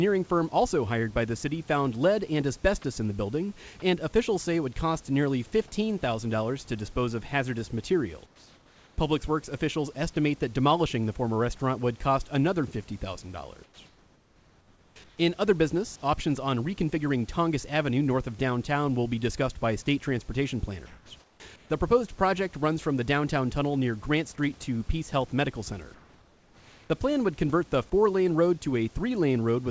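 Speech over a wideband call path with nothing above 8 kHz, which fits G.722 at 64 kbps, carrying two kinds of fault. At 3.80 s a 20 ms piece of the speech vanishes and a brief patch of flat noise stands in for it: sound dropped by the voice detector. The likely cause is that the sender's speech detector briefly judged that instant to be background and stopped transmitting, so the receiver inserted synthetic noise until the detector triggered again. The second fault, comfort noise in place of the background, occurs four times: 8.26 to 8.98 s right after "to dispose of hazardous", 13.64 to 15.18 s, 20.86 to 21.70 s after "discussed by state transportation", and 25.94 to 26.90 s just before "plan would convert the". In these pauses the natural room noise, which sits about 32 dB under the speech, gives way to a smooth, featureless hiss. At 8.26 s and 25.94 s this substitute is about 4 dB quieter than the real background. 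The likely cause is discontinuous transmission, where the sender goes silent between phrases and the receiver synthesizes noise that only roughly matches the background's level and spectrum.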